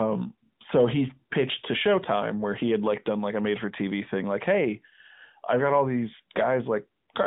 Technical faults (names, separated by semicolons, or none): none